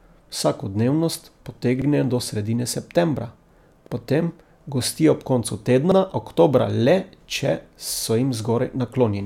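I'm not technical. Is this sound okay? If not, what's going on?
No, not quite. This speech has a fault called overlapping chunks. The audio was handled in 2-second pieces, and each new piece starts 50 milliseconds before the previous one finished, so that sliver plays twice. You hear it as a small stutter or click at 1.82 s, just before "do sredine septembra", at 3.87 s, just before "potem gostijo ob koncu", and again at 5.92 s, every two seconds like clockwork.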